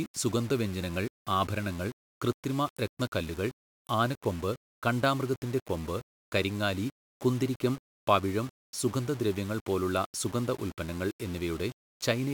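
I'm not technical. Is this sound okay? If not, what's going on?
No. From start to finish the speech has a rough, gritty grain riding on it. This is likely low bit depth without dither: the audio was stored with too few steps of loudness, which fits about six bits, and each value was rounded. Unlike steady background hiss, this grit follows the speech, growing and changing as the speaking does, and quiet tails break up or sputter instead of fading smoothly.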